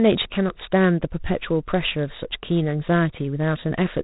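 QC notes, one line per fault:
throughout, G.726 ADPCM: coarse difference coding, consistent with 24 kbit/s, adds a rasping hiss that tracks speech level; the spectrogram shows noise rising with loudness and nothing above 3.8 kHz.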